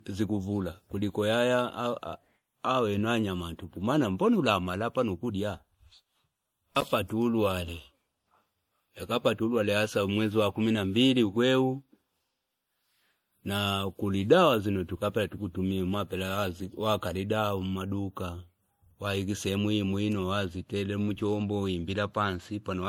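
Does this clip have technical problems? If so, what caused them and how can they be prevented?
Yes. Throughout the speech, the sound carries the swirly, smeared artefacts of a heavy MP3 encode, likely low-bitrate audio saved at a high bitrate, consistent with roughly 64 kbit/s MP3 re-saved near 192 kbit/s. On a spectrogram, the upper band looks patchy and blotchy below 20 kHz. Prevent it by encoding once from the original source.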